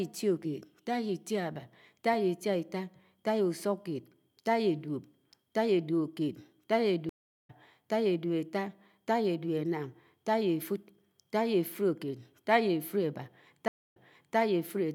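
Speech with two stream reconnects: at 7.09 s a 394 ms silence ends with the audio resuming about 0.4 s further on, and at 13.68 s a 276 ms gap resumes 408 ms earlier, repeating material. Unlike a simple dropout, the restarted decoder picks up at a different point.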